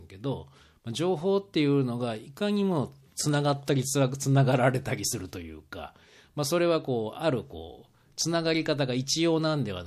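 At 3.66 to 3.68 s in the speech there is pre-echo ahead of a sharp attack. The codec spread its quantisation noise across a transform block of about 36 ms, and because the attack falls late in that block, noise sized for the loud onset also fills the quiet stretch just before it. The result is a brief hiss lasting about 20 ms and rising about 11 dB before the onset, with the attack itself sounding softened. The smearing suggests the encoder did not switch to shorter blocks for this transient.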